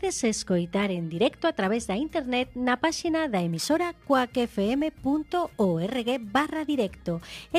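From 3.56 s to the end, crude rate conversion sets in. Instead of filtering, the signal was resampled by repeating the nearest sample, a pattern that fits a conversion from 44.1 kHz to 48 kHz. The repeating timing error creates shifted, inharmonic copies of the sound, roughly 30 dB below it, heard as a gritty, inharmonic fizz riding on loud and bright passages. A spectrogram shows faint stray lines and mirrored images scattered across the upper band, tracking the strongest components.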